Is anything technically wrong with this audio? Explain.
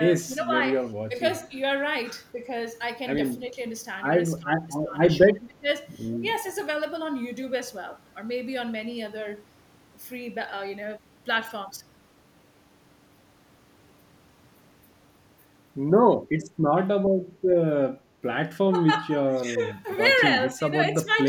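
Yes, the speech has two faults. Speech suppressed in double talk occurs at 0.14–1.14 s, 3.39–3.58 s, 4.38–5.67 s, 18.68–19.84 s and 20.47–21.12 s. It is likely an echo canceller ducking the talker while the far side speaks. The level dips in pieces, by about 5 to 15 dB. Unlike dropouts, it follows the overlapping talk. Echo leak occurs at 6.34–6.6 s. It is likely residual loudspeaker pickup that the far end's canceller passed back. It sounds like a faint copy about 30 dB down, arriving 265 ms late, which is a repeat rather than reverb.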